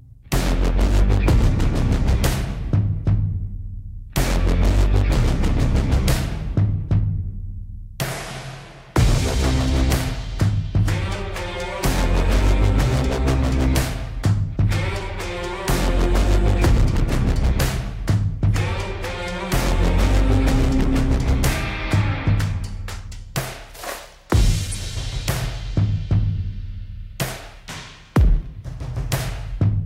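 At 24.70 to 24.76 s a corrupt frame decoded produces a brief chirpy burst: damaged bits in what sounds like a few consecutive compressed frames were played anyway, misplacing energy. A spectrogram shows a smeared, off-pattern block; the waveform spikes to about -20 dBFS.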